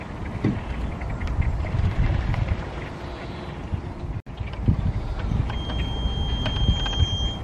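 A thin, slowly swelling feedback whistle near 3.2 kHz sits about 10 dB under the audio from 5.44 s to the end, likely a speaker-to-microphone loop held at the edge of feedback.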